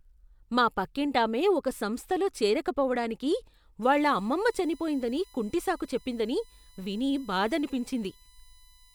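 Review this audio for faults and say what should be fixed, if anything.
USB whine: 1 ms bus-frame current leaks through power or ground, adding a steady 1 kHz-based whine, strongest at 4 kHz and about 30 dB below the speech, from 3.83 s, after "పక్కింటామె ఒక సంస్థలో చేరకపోవటానికి", to the end. Prevent it with a ground-loop isolator, a powered hub, or a separately powered audio interface.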